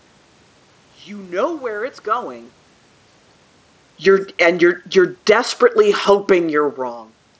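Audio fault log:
3.92–4.59 s and 5.14–6.9 s, automatic gain falling: the level is pulled down twice, by about 3 dB over the first stretch and about 4 dB over the second. Each time the call's gain control has judged the input too hot, or its background noise too strong, and backs its gain off gradually. Unlike a talker moving, which happens again near 6.5 s, the room noise sinks along with the voice, showing the whole signal is being turned down rather than the source moving away.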